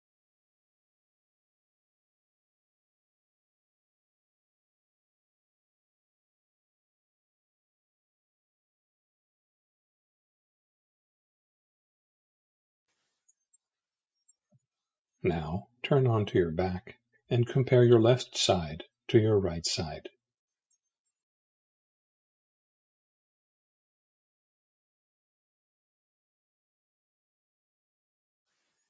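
There are no technical faults to describe in time order; the audio has only passed through a call's microphone processing, which leaves nothing above 8 kHz and normally trims the lowest bass.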